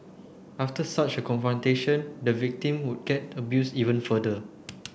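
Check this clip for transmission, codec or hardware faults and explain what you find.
Nothing stood out on listening to this speech recording.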